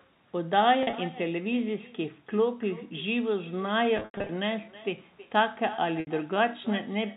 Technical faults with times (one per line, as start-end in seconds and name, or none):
0.00-7.17 echo with no canceller
0.83-0.93 packet loss with pitch repetition
3.97-4.29 packet loss with pitch repetition
6.00-6.07 packet loss with pitch repetition